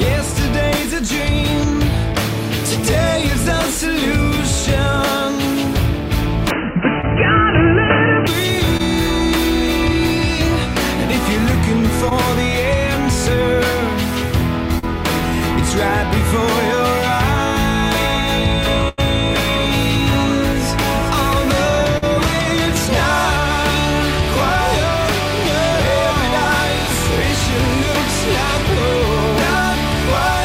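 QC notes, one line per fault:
6.51–8.27 s, input switched to a poorer device: the capture likely moved to a narrower-band input and then back. Nothing above 3 kHz survives, so the sound turns dull and boxy, with a level shift of a few dB and a new noise floor about 40 dB down. There is no gap at either switch.
7.01, 8.77, 12.09, 14.79 and 21.98 s, short concealed packet loss: 20 to 40 ms of audio went missing each time, and the decoder patched the hole by extending the preceding sound before blending back in. Each one is heard as a brief smear or wobble.
18.89–19.00 s, burst of packet loss: about 80 ms in a row never arrived. Concealment stretched the last sound across roughly 90 ms, fading it as it went, so a held buzz or fading hiss replaces the missing stretch before the audio resumes further on.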